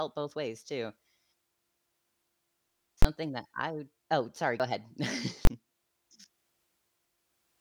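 In this speech clip, a calculation twice produced infinite or invalid numbers, which were pinned to full scale for a block of about 21 ms, consistent with a 1024-sample block. At 3.02 to 3.05 s and again at 5.45 to 5.47 s, this invalid-numbers-at-full-scale fault is heard as a single loud bang, since the block is too short to separate into two pops. At 4.60 s, the recording jumps forward, dropping roughly a twentieth of a second and joining the two sides with no gap. This is likely audio missing between chunks, lost while one 2.5 s chunk closed and the next opened.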